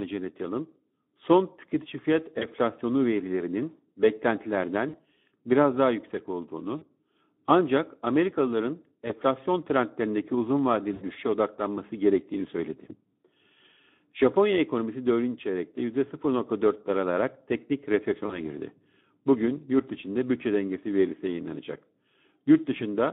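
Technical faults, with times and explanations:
Throughout, Speex codec: speech at 11 kbps sounds hoarse and noisy from starved excitation. The spectrogram shows energy confined to 200 Hz–3.6 kHz with grainy harmonics.
2.39–2.46, 4.89–4.95, 6.77–6.85, 9.07–9.12, 10.94–11.06, 18.25–18.41 s, VoIP packet loss concealed by the speech codec: 20–80 ms gaps are filled with a stretched, fading buzzy tone or coloured noise. On the spectrogram, these appear as frozen, smeared harmonics, and the waveform shows a decaying envelope.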